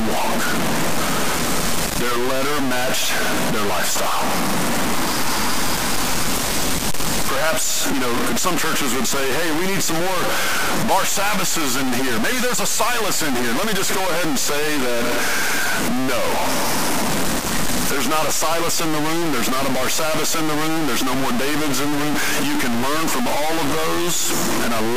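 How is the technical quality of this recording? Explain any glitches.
Poor: the speech is heavily degraded for its whole length by one fault, low bit depth without dither. The likely cause is a signal stored at about 3 bits and truncated rather than rounded, with no dither added. With so few steps, the error tracks the waveform itself, producing grainy, buzzing distortion that shifts with every syllable and sits only slightly below the speech in level. Quiet passages collapse to silence or sputter between adjacent steps.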